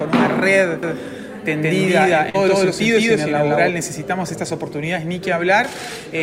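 A doubled audio track runs from 0.83 to 3.69 s: a second copy at roughly the same level trails about 150 ms behind, with no room colour, likely from a slower second capture path. Around 2.29 to 2.36 s there's short concealed packet loss, where about 40 ms went missing and the receiver papered over it with a brief smeared fill.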